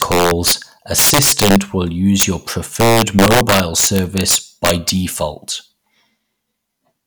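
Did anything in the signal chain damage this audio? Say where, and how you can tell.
Yes: integer overflow in sample-format conversion, where gain about 6 to 8 dB too hot wrapped peaks to the opposite sign, giving violent cracks at 0.02–0.52, 0.98–1.56, 2.20–2.23 and 2.80–4.89 s.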